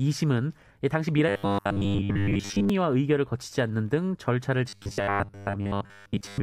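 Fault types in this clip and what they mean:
Robotic sound from repeated short buffers: a rigid, metallic 100 Hz buzz that follows the speech only roughly, likely from a 10 ms buffer replayed while most real audio is skipped.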